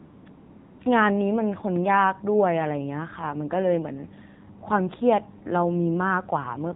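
From the very start the background turns into a smooth, even hiss that sits in place of any real room sound, first from 0.0 to 0.26 s and again from 0.30 to 0.80 s, with a brief return to normal signal between the two. This is AMR comfort noise. The phone decided nobody was talking and stopped sending speech frames for about 255 ms and then 500 ms. The receiver filled each gap with synthetic noise built from a rough sketch of the background's level and spectrum, so the real ambience is swapped out and the fill switches in and out.

Across the whole clip the speech sounds dull, with nothing above 4 kHz, and carries a plainly audible buzzy, synthetic edge. That is the AMR narrowband mobile codec. It samples at 8 kHz and rebuilds the voice from a vocal-tract model driven by a handful of pulses per subframe. The degree of roughness points to a low mode of around 7.4 kbps, which leaves too few bits to model the voice naturally.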